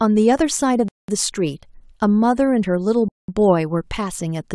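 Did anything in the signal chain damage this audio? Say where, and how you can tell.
Yes, there's a gap between chunks at playback or streaming. There are clean 200 ms holes with hard edges at 0.88–1.08 s and 3.08–3.28 s, 2.2 s apart. The speech arrives in 2 s chunks, and silence is inserted at each join rather than any sound being lost.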